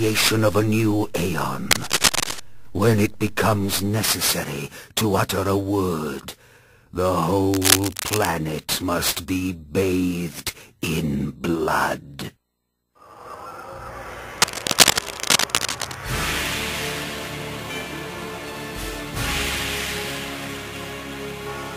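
At 1.71 to 2.40 s, 7.51 to 8.32 s and 14.38 to 15.97 s, bursts of cable scratch noise break in as a dry, crackling rustle riding over the sound. The likely cause is a worn cable or connector being moved, so its contact resistance flickers. The first and third bursts sit roughly 5 dB above the signal, the second about level with it. On a spectrogram each shows as ragged broadband smears; the waveform shows dense, irregular spikes.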